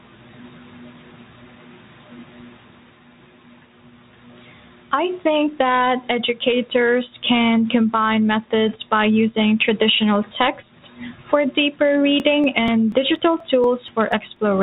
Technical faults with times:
12.20-14.36 periodic USB or driver dropouts

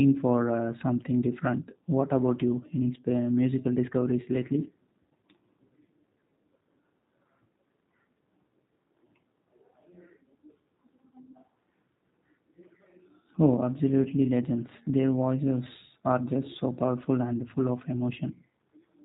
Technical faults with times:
0.00-19.05 G.729 codec

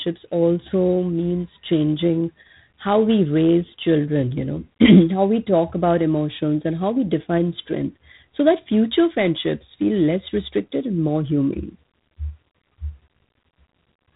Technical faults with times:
0.00-14.15 G.726 ADPCM

